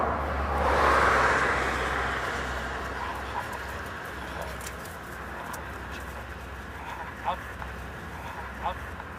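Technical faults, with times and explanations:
7.59–9.18 s, doubled audio track: a dry, equally loud copy cuts in abruptly and trails about a second and a half behind to the end, likely from a slower second capture path.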